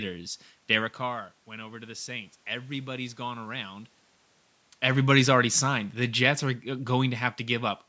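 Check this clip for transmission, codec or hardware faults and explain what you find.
One fault: automatic gain falling, from 4.87 to 7.81 s. The gain control judged the input too loud or its background noise too strong and reduced gain by about 4 dB, so the speech and room background sink together.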